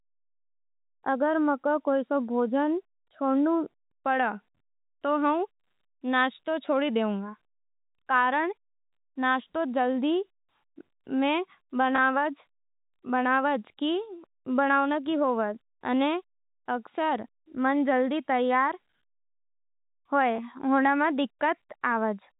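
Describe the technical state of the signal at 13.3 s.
At 13.3 s the speech is intact, carried through the usual 4 kHz telephone band of G.711 coding with no fault at that point.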